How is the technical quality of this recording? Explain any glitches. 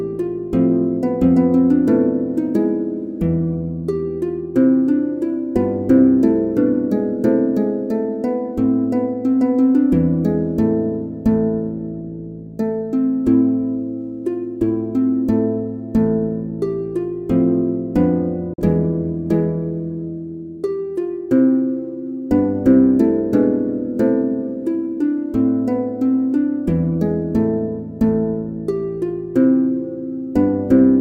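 One glitch stands out: a digital broadcast dropout from 18.54 to 18.63 s. The receiver stopped getting usable frames and muted, fading out in about 3 ms. Roughly 43 ms of programme, which fits a single lost frame, vanishes into a brief silent hole before the sound resumes.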